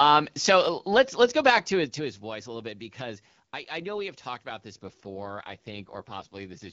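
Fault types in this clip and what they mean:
AMR rate drop: from 4.84 s on, speech turns raspy and synthetic with no gap or narrowing, fitting a network-ordered fall from 12.65 to 6.6 kbit/s.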